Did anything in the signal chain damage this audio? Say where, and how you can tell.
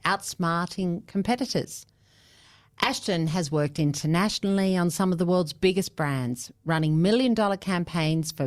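No, nothing along the chain from capture to playback has left any audible damage on this speech recording, and the signal holds steady and continuous throughout.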